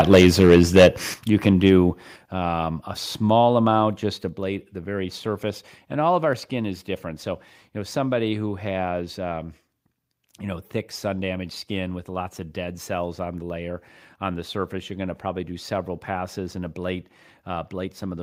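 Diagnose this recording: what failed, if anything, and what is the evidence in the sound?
Microphone overload at the converter stage: from 0.0 to 0.88 s the peaks exceed full scale by about 8 dB, with roughly 7% of samples flattened, and again at 1.46–1.49 s by about 2 dB, just before "do um a small". The likely cause is excessive input gain. The harsh crackle appears only on the loudest peaks, unlike codec distortion, which smears quieter passages too.

Microphone volume stepped down, likely in call processing: level drops abruptly at 0.15 s (about 2 dB), 1.14 s (about 8 dB), 2.16 s (about 6 dB, before "um a small amount"), and 4.29 s (about 4 dB, between "a small amount just" and "the very surface"). Background falls with the voice in single steps, not a gradual automatic-gain glide.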